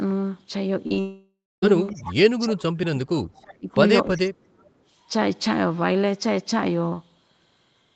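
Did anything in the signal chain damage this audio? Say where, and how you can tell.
Yes. The damage comes from the network and the call's echo processing.

Network stage, short concealed packet loss. Two brief gaps fall close together, at 0.87 to 0.92 s and 0.94 to 0.98 s. Each is about 20 ms of missing audio. The receiver patched each hole by carrying the previous sound forward, then blending back into real audio. You hear this as a quick smear or wobble in the voice rather than a clean gap. Any short consonant there can go missing.

Network stage, long network dropout. From 1.00 to 1.69 s, about 0.62 s of audio never played. The decoder first stretched the last sound into a fading buzz or hiss. Once that guess ran out, roughly the final 240 ms went silent. When the speech resumes, the lost portion is simply gone, not delayed. This is most likely a stall in packet delivery across the network.

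Call processing, echo leak. A faint delayed copy of the voice appears at 1.91 to 2.14 s, 4.11 to 4.17 s and 4.65 to 4.69 s. It trails the original by 0.32 s each time. It sits about 15 dB, 20 dB and 40 dB below the speech respectively. A fixed delay like this is the signature of a loudspeaker path. The likely cause is an echo canceller on the loudspeaker side that failed to remove everything its microphone heard.

Call processing, speech suppressed in double talk. The voice sinks sharply between 2.39 and 3.70 s, dropping by roughly 30 dB, for about a second in total. It dips again from 4.10 to 4.33 s, about 25 dB down, for around 0.2 s. These dips have nothing to do with how the talker speaks. Overlapping talk likely confused the echo canceller, so it turned the real voice down along with the echo.

Call processing, background gated by the echo canceller. At 4.61 to 4.74 s the room sound ducks by about 10 dB for roughly a tenth of a second, then comes back. 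The dip lines up with the faint echo at 4.65 s. That timing shows the canceller clamping the microphone while the loudspeaker played, then releasing. The Opus coding on the call path, band-limited at 8 kHz, is separate from these faults.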